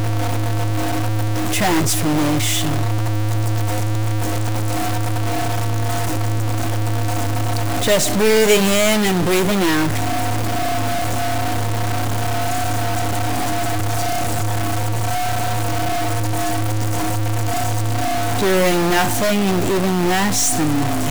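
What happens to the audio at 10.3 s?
At 10.3 s, as across the whole clip, the sound carries a stuck-bit fault, likely from a data line or converter bit held fixed. Roughly half the samples are pushed off by that bit's weight, a step of around -15 dBFS, in a pattern that follows the waveform. The result is a harsh, buzzy distortion riding on everything, and because the error flips with the sign of small values, quiet stretches fill with a fairly loud noise floor.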